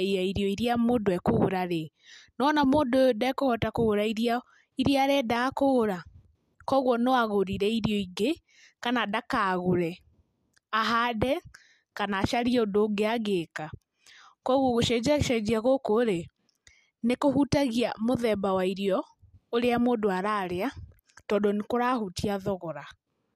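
Nothing in the recording stood out as a technical fault on listening.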